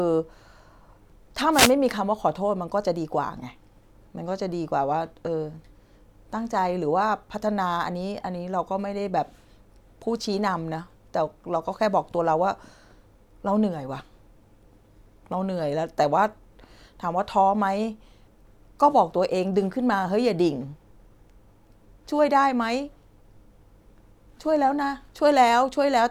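At 1.51 s the speech is interrupted by a wireless microphone noise hit lasting about 0.21 s, until 1.73 s. The radio link from an analogue FM transmitter briefly faded, most likely as reflected signals cancelled at the receiver, so the receiver's own noise rose. It is heard as a short swish of static. On a spectrogram it shows as a brief broadband smear spanning the frequency range, and the waveform shows a dense hiss-like fill over the speech.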